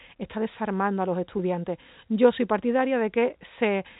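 Nothing goes wrong here: the speech comes over a G.711 telephone line, so the sound simply stops at about 3.8 kHz, which is just how that phone coding works.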